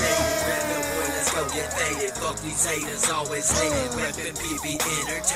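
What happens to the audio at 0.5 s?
Nothing goes wrong at 0.5 s; the audio plays through that moment intact, with no dropout, click or other audible fault.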